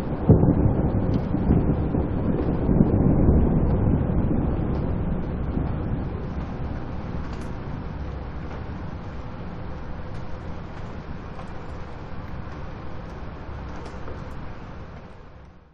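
Nothing in these everyday sounds points to a technical problem; there's simply no fault to report here.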